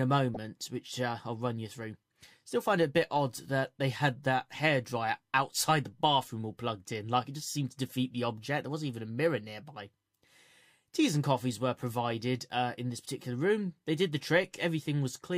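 Right at the start, from 0.34 to 0.37 s, there's a quick burst of DAB burbling. Weak reception let bit errors slip past error correction into the MP2 data, corrupting three frames. You hear a few short watery blips over the sound.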